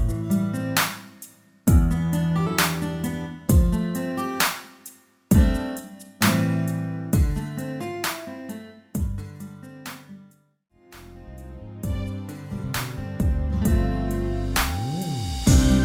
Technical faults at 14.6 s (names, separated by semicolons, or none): none